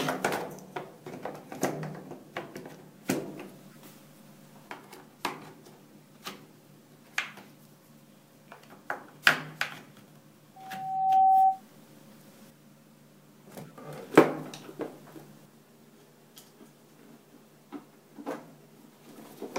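Corrupt frames were decoded and played anyway, causing brief chirps or noise bursts at 3.71–3.80, 8.48–8.61, 13.55–13.72 and 18.28–18.35 s, the last one loudest. A loudspeaker feedback squeal comes from a microphone picking up its own loudspeaker: a 766 Hz tone swells over under a second to about 15 dB above the audio, from 10.56 to 11.61 s.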